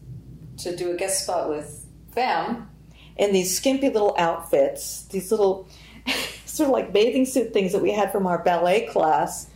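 Crackly, flattened peaks from 3.22 to 4.62 s and again from 6.71 to 9.14 s are hard clipping: the audio overran a stage by about 3 dB, squaring off its tops.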